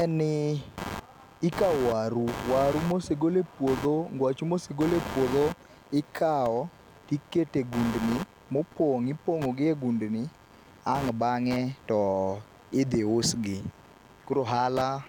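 From start to finish the speech carries computer activity noise, a gritty buzz pulsing around 100 times per second and sitting roughly 15 dB below the speech. Shifting processor, graphics or mouse load disturbs the ground the audio circuit shares with the computer, so the buzz rises and falls with that activity rather than with the talking. A spectrogram shows evenly spaced vertical striations running through pauses, and the waveform shows a pulse train between words.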